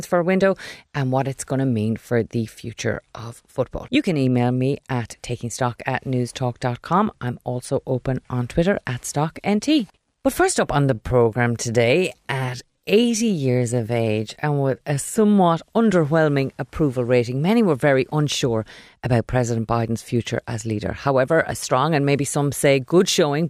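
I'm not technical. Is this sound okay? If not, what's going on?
No. There is a time-stretched section from 10.78 to 15.50 seconds, right after "first up" and ending just before "underwhelming approval rating many". The speech suddenly slows to about 69% of its normal pace, but the pitch stays the same. It drags. The likely cause is software lengthening that stretch to fill a time slot by repeating tiny bits of sound. Then the normal pace snaps back.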